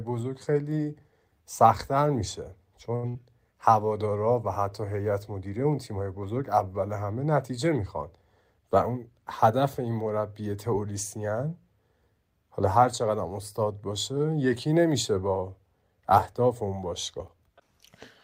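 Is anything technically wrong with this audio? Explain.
Yes, the speech has three network-related faults, two close together and one later.

At about 2.95 s a short stall from a late packet holds the current sound for about 75 ms. The jitter buffer ran dry, the receiver stretched the last sound until the packet arrived, and nothing is lost. On a spectrogram the harmonics run flat and unchanging through that stretch.

From 3.09 to 3.27 s a burst of packet loss removes about 60 ms of speech. The receiver extended the last sound for about 58 ms while turning it down, then resumed further along. The waveform shows a decaying, repetitive patch, then an abrupt restart.

From 8.54 to 9.27 s a jitter buffer speed-up cuts roughly a tenth of a second, playing at 111% speed with unchanged pitch. Short pitch-period chunks were dropped repeatedly to shrink excess buffering. The speech sounds hurried, and the spectrogram looks horizontally compressed with harmonics steady.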